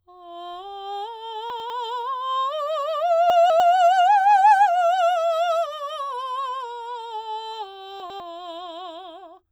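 Chunks out of order hit this music at 1.5–1.7 s, 3.3–3.6 s and 8.0–8.2 s: a block of audio plays late, after the material that should follow it, one block late in the first and last and two in the middle. The jumbled moments fit blocks of about 100 ms.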